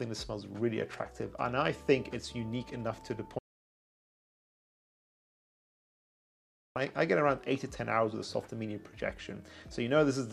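The input signal was likely lost, leaving silence written from 3.39 to 6.76 s: an audio dropout to silence, cutting out abruptly for 3.37 s with no room tone.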